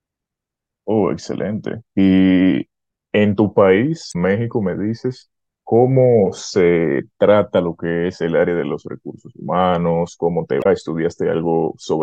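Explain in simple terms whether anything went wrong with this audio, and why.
Damaged data in a compressed stream causes two brief glitches in this speech, at 4.09 to 4.16 seconds and again at 10.59 to 10.66 seconds, each lasting about 70 milliseconds. Small stretches of the compressed file were corrupted, so the player couldn't make sense of those bits. It stumbled, lost its place, and had to hunt for the next clean starting point. You hear each spot as a short chirp or blip interrupting the speech.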